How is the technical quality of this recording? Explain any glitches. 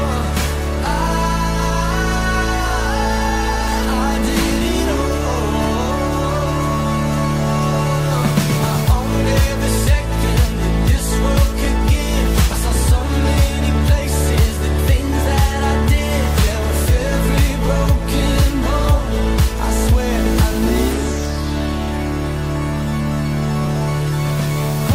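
The recording has one recurring glitch: overlapping chunks. The audio was handled in blocks of 6.0 s, and each block began slightly before the previous one ended, so about 6.5 ms of sound is played twice at every join. This happens at 5.65 s, 11.65 s, 17.66 s and 23.66 s. Each repeat is heard as a brief click or tiny stutter, and these recur at that steady six-second spacing through the clip.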